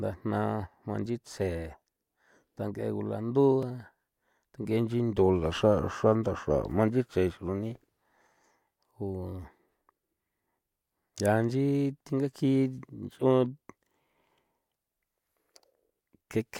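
A speech clip with one block of digital silence at 3.63 s. The sound drops to silence for about 2.7 ms, then returns. There is no fade in or out. At this length the gap is heard as a tick rather than as silence. A gap this short and this clean fits one 128-sample output buffer that was not filled in time.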